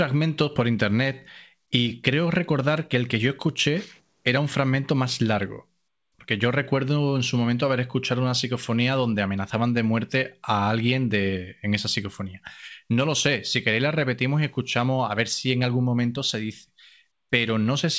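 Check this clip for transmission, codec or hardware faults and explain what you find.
No transmission, codec or hardware faults found here.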